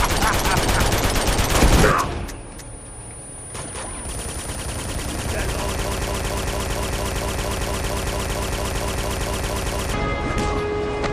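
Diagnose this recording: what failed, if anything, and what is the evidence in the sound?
A broken-record loop runs from 5.86 s to 9.94 s: a fragment of about 0.23 s repeats exactly, back to back, 18 times, and whatever should have played in those four seconds never arrives. The likely cause is a stall in the player, encoder or stream, which kept sending the last buffered piece. Unlike an echo or reverb tail, each pass is identical and never decays, and unlike a dropout there is no gap.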